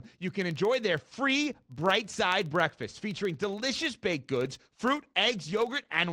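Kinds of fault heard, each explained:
Filter restarted on every block: The speech passes through a filter that loses its memory at each block boundary. Each block then starts from silence and leaves a small transient. Those transients repeat at 21.5 Hz, which fits a 2048-sample block. They run through the whole clip as a low buzz of regular ticks. The buzz rises and falls with the speech, growing stronger in louder passages and fading in quiet ones.
Call bitrate drop: From 4.45 s to the end, the speech turns coarser and rougher. The call's bandwidth estimate fell, so the encoder was told to spend far fewer bits. The sound points to a fall from about 32 kbps to roughly 14 kbps. At that rate the coding grows grainy and watery, and the top end dulls. The lowest rate holds for about 1.7 s and does not recover before the clip ends.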